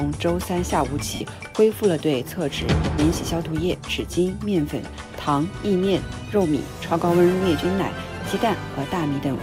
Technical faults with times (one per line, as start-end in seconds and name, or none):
1.14-1.21 lost LE Audio frames
7.63 lost LE Audio frames